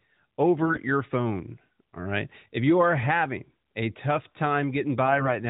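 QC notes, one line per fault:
0.62–0.78 s and 5.06–5.31 s, AMR bit errors: Both bursts turn the sound briefly hoarse and gargly, with pitch and level roughly intact. Around a tenth of the weakly protected bits in each 20 ms frame of the 12.2 kbps AMR-NB stream arrive flipped, a little fewer in the later burst. The excitation pulses land in the wrong places, and the fine pitch, gain and spectral values drift.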